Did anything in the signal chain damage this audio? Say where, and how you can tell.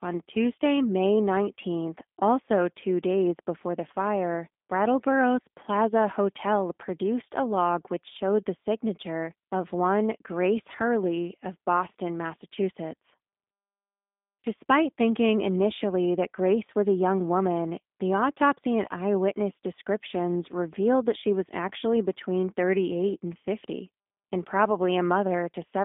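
Yes, at the codec stage. The damage from a G.729 codec runs through the whole clip. The speech is band-limited to roughly 250 Hz to 3.6 kHz, with no content above, and it has a plainly audible rough, synthetic texture. That texture comes from rebuilding the speech out of a vocal-tract filter, a pitch predictor and a few sparse pulses per frame, rather than sending the waveform itself, and it fits an 8 kbit/s G.729A link.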